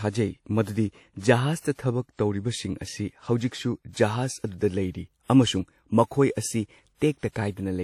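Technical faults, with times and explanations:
Throughout: WMA compression, likely, gives washy, ringing speech with breathing hiss and nothing above 17.7 kHz, consistent with a low bitrate near 48 kbps.
2.15–2.19 s and 7.18–7.23 s: pre-echo, where hiss smeared across the transform block leaks ahead of sharp attacks for 37 ms and 51 ms, softening them.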